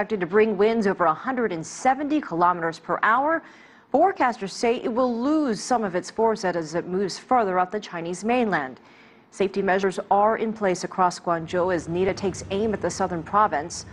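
Two sudden skips break the audio, at 9.83 s and again at 12.09 s, and at each the sound lurches forward with no gap of silence, as if a tiny slice had been snipped out and the ends butted together. Roughly 40 ms seems to vanish at the first and about 20 ms at the second. The likely cause is a dropped buffer (overrun): the capture side fell behind, fresh samples overwrote uncollected ones, and the missing block left a hard splice.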